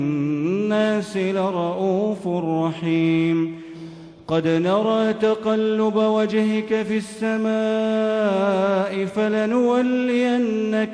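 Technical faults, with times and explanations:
No technical faults can be heard anywhere in the signal.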